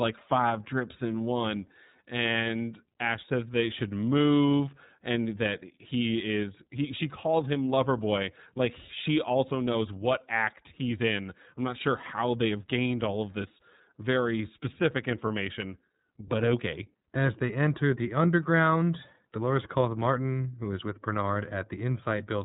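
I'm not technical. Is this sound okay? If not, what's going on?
No, not quite. The whole recording has been squeezed through the iLBC codec, a phone-call voice codec. It keeps nothing above about 3.8 kHz, so the speech sounds muffled and boxy, like an old phone line. The damage is plainly audible: voices come out a bit rough and artificial, because the codec rebuilds the sound in short independent chunks, which fits 30 ms frames. It's still understandable, just not natural-sounding.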